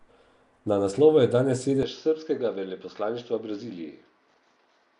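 From the start, the speech has most likely been through Nellymoser compression, the old Flash microphone codec, which spends a fixed, small bit budget on each short block and fills bands it can't afford with noise. The damage is plainly audible: a rough, hissy halo around the speech and a smeared, underwater quality, with nothing above 10.6 kHz. The sound points to a stream of around 44 kbps.

At 1.83 s, right after "naslovu je danes", the recording likely switches to a poorer input device, with no gap at the changeover. From there to the end, the band closes down to nothing above 6.5 kHz, so the speech turns duller and boxier on top of the codec haze. It also drops by about 5 dB and carries a faint new background noise sitting well below the speech.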